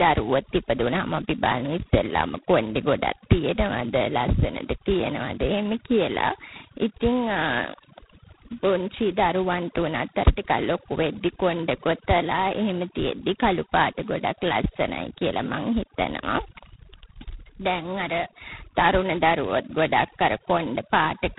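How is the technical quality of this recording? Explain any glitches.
The quality is poor. The speech has been through two damaging stages, and both run through the whole clip.

Overdone noise removal is there from start to finish. The denoiser was pushed so hard that it cuts any frequency band sitting near its noise estimate, and the quieter parts of the voice go with it. The pauses fall to near silence with little twinkling specks.

G.726 ADPCM coding also runs throughout. It sends each sample as a coarse difference from a running prediction, and the heavy damage here fits the 16 kbit/s rate, with only about 2 bits per sample. That gives a harsh, rasping hiss that rises and falls with the speech level. Nothing gets through above 3.9 kHz, so the sound is boxed into a narrow telephone band.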